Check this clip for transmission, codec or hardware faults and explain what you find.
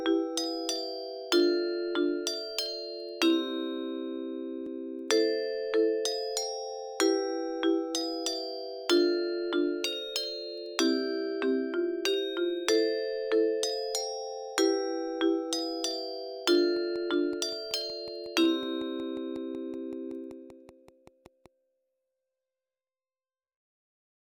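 Two faults are audible.

At 4.66 s there is a small jump forward in the sound. This is likely a dropped buffer (overrun). The hardware overwrote a block before the program collected it. A few milliseconds vanished, and the two edges were spliced with no gap.

From 16.77 to 21.47 s there is a train of clicks. They come at a steady 5.33 per second, around thirty in all, and are about as loud as the sound itself. The pulses share one shape and keep a regular pace. That points to outside interference or a struggling interface, not to the audio content. The ticking stays audible throughout the stretch.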